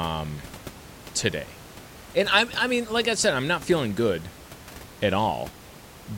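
A speech recording with no technical faults. Background noise from the room sits about 19 dB below the speech and belongs to the recording itself.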